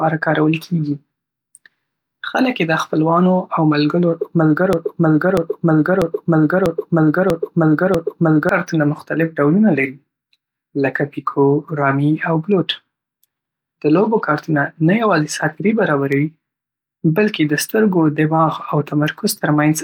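Speech with a broken-record loop from 4.73 to 8.49 s: a 0.64 s fragment repeats six times, likely a stalled stream, showing as identical back-to-back blocks on a spectrogram.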